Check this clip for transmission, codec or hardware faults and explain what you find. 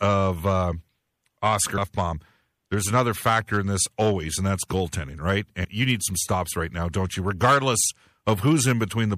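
Two faults are audible: codec damage across the whole speech clip, and two short jumps where compressed audio went missing.

MP3 compression runs throughout. The sound has a watery, swirling texture with smeared consonant attacks. The cause is likely an encoder short of bits, with damage at a level that fits a low bitrate near 64 kbps.

Compressed frames are skipped at 1.77 s and 5.63 s. The first jump loses roughly a fifth of a second of audio, and the second about 150 ms. These gaps fit runs of several frames of about 26 ms each. Overlapping frames blur each join into a short smeared blip rather than a hard click.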